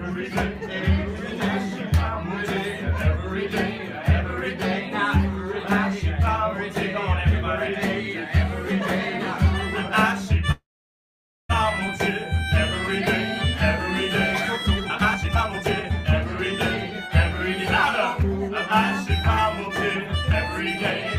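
At 10.51 s the sound stops and a call audio freeze begins, lasting until 11.51 s. The last sound carries on briefly as a fading buzz, then about 0.87 s of silence follows. The likely cause is packets held up in transit while the jitter buffer ran dry. When the audio resumes, it picks up where it left off. Nothing is lost, but about 1 s of extra delay is now built in.

From 14.67 s to 16.06 s comes a jitter buffer speed-up. The receiver had more audio queued than it wanted and trimmed short pitch-period slices repeatedly. Playback runs at about 154% speed and sheds roughly 0.7 s, so it sounds clearly rushed while the pitch holds steady. A second, gentler speed-up runs from 18.22 s to 20.33 s at about 104%. It removes only around a tenth of a second and is barely noticeable as hurried.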